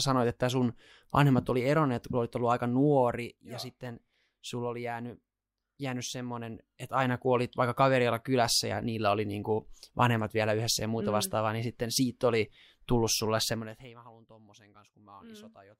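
No technical faults can be heard.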